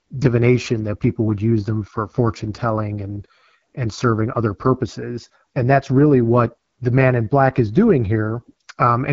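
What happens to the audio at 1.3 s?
AMR wideband (HD Voice) codec damage runs through the whole clip, including 1.3 s. The speech sounds rough and raspy, which fits one of the codec's lowest rates, probably 8.85 kbit/s. The codec models the speech as pulses through a vocal-tract filter, and nothing is heard above 7.5 kHz.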